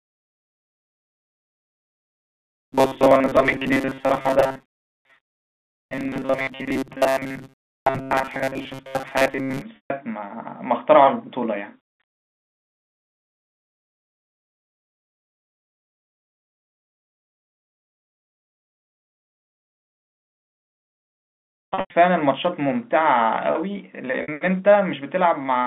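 Robotic sound from repeated short buffers runs from 0.01 to 9.62 s. The audio was likely starved, so roughly 7.5 ms snippets repeat over most of it, fixing a metallic 134 Hz buzz. Packet loss with pitch repetition follows at 9.76 to 9.90 s and again at 24.22 s. The receiver bridges 140 ms, then 60 ms, by looping the last pitch period, which fits several lost 20 ms packets. This is heard as a held buzz that fades into silence, with speech returning through a short cross-fade, within the 250 Hz to 3.6 kHz telephone band of G.711.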